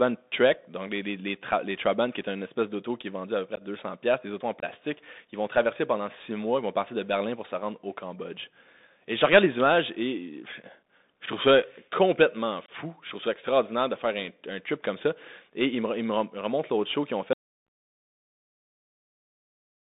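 Bluetooth CVSD headset codec, throughout: the speech passes a 64 kbps CVSD link limited to roughly 200 Hz to 3.7 kHz, so it sounds thin, with scratchy s sounds and a granular hiss.

Unconcealed Bluetooth headset packet loss, at 3.56 to 3.62 s, 4.60 to 4.64 s and 12.66 to 12.70 s: each time two or three headset packets, about 15 to 22.5 ms, never arrive and leave abrupt holes.

Audio dropout to silence, from 17.33 s to the end: the speech cuts off into silence with no room tone, likely because the headset link failed or disconnected.

A further unconcealed Bluetooth headset packet loss at 17.67 s falls inside that silence.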